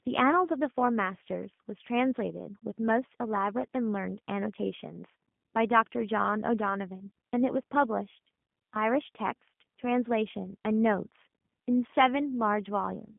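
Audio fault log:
Throughout: G.729 codec. The speech sounds plainly rough and synthetic, band-limited to roughly 150 Hz to 3.5 kHz with nothing above 3.7 kHz. At 8 kbit/s the codec rebuilds each frame from a vocal tract filter, pitch predictor and sparse pulses, discarding fine detail.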